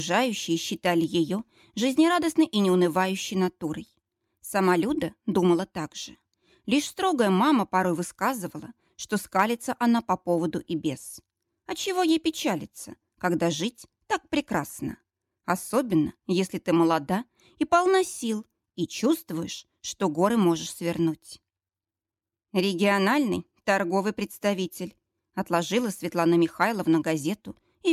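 Nothing in this one trips me up at all; there's no dropout, glitch or distortion anywhere to point to.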